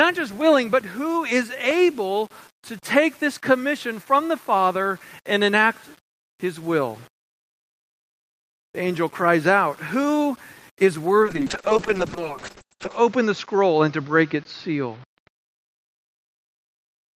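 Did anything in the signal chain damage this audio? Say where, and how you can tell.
Yes. Throughout the whole recording the speech carries a grainy distortion that tracks the signal: quiet passages and decays turn gritty instead of sitting on a smooth noise floor, with the error roughly 30 dB below the speech. That points to the sample-format conversion stage, likely low bit depth without dither: samples rounded to something like 7 bits, so the quantisation error is correlated with the waveform and moves with it rather than forming a steady hiss.

The second fault comes from the call path and codec. From 11.24 s to the end of the clip the sound turns rough and muffled: the audio band narrows from 20 kHz to 8 kHz, and the coarsest stretch lasts about 1.74 s. This is a call bitrate drop. The coding quality suggests the encoder went from around 32 kbps to about 6 kbps after the bandwidth estimate fell, so it quantised more coarsely and removed the upper band.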